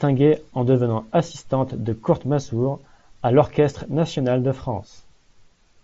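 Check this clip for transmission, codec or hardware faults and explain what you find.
Nothing stood out on listening: the speech comes through a Bluetooth mSBC headset link with its expected wideband character, nothing present above roughly 7.7 kHz and only light codec graininess, none of which amounts to a fault.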